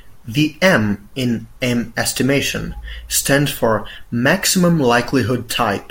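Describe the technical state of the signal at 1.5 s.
At 1.5 s the speech signal is intact, with no audible dropout, clipping, distortion or other fault.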